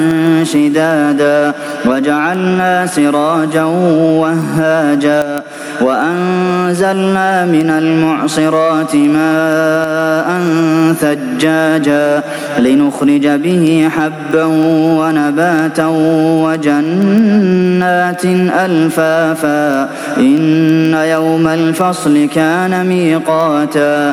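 Gain pumping runs through the whole clip: the gain ducks by about 10 dB under each loud sound, likely from gain set far too high with a fast limiter clamping it. On the waveform the envelope looks flattened, with the quiet stretches rising between peaks.

Word clock ticks run from 0.11 s to 24.04 s, recurring at a steady rate of about one every 0.15 s with uneven strength. An unlocked receiving clock, off by very roughly 150 ppm, drops or repeats one sample at each slip. These show as thin vertical lines across the spectrogram and as short spikes on the waveform.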